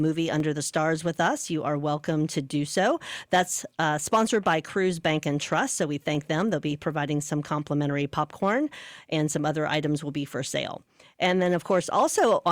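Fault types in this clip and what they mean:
Dropped samples: Two single sharp clicks punctuate the speech, one at 0.40 s and another at 6.15 s. Each is a brief tick with a thin vertical streak in the spectrum and no audible gap. The likely cause is a tiny run of samples, a fraction of a millisecond, going missing from the stream, so the waveform jumps straight from one value to a later one and that discontinuity is what you hear.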